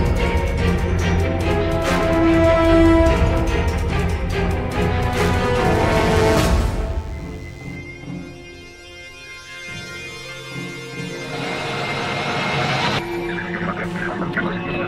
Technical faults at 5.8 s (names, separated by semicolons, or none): DECT cordless phone buzz